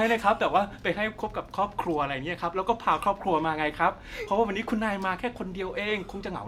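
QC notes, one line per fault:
No technical fault is audible anywhere in the signal.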